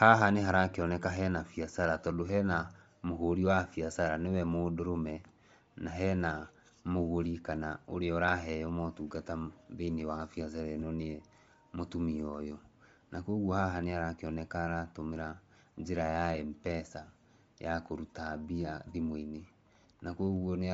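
Throughout, the speech sounds grainy and breathy. A spectrogram shows a hard ceiling at 7.7 kHz with speckled noise fill, likely from Bluetooth LC3 compression.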